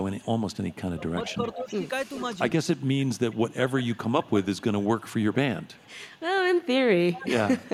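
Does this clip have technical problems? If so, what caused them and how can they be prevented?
Yes. There's echo leak at 0.04–0.76, 1.26–1.76, 2.16–2.28, 2.64–3.86, 4.23–6.21 and 7.13–7.28 s. It's a copy of the speech trailing by about 0.42 s, mostly about 30 dB down but louder near 1.3 s and 2.2 s and at 7.1 s. The likely cause is a far-end loudspeaker whose echo canceller let some of its own playback back into the microphone. Using a headset or a properly tuned canceller on that end would prevent it.

There's also speech suppressed in double talk at 0.91–1.9 and 3.37–4.37 s. The speech dips in patches, by about 20 dB in the first stretch and about 25 dB in the second, for around half a second and a second in total. That's likely the canceller mistaking overlapping talk for echo and turning it down. Better double-talk detection, or less echo to begin with, would stop that.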